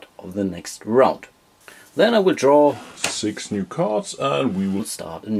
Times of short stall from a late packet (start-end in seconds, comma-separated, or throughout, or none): none